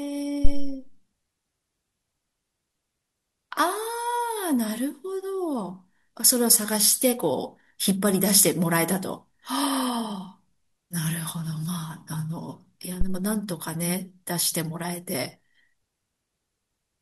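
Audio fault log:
0.45–0.82 s and 13.01–13.26 s, phantom power thump: a supply switching on or off on the live input sends a DC step through the coupling capacitors, heard as a deep thump peaking at about −4 dBFS, then about −11 dBFS, with smooth decays of 84 ms and 56 ms. Unlike a plosive pop or handling bump, each is a single clean low-frequency step with an even exponential tail, carrying no breath, rustle or irregular texture.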